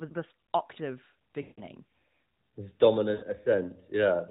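A speech clip carried over the AMR narrowband mobile codec, with nothing above 4 kHz and only light, slightly synthetic coding colour. It has two bursts of lost AMR speech frames, at 1.42–1.61 s (about 160 ms lost) and 3.14–3.24 s (about 80 ms). At each, the decoder repeats the last good pitch and vocal-tract settings at falling gain, so the voice drags out and fades toward silence before recovering weak and rough. On a spectrogram the harmonics smear into flat horizontal streaks that darken; the waveform shows a steadily decaying envelope.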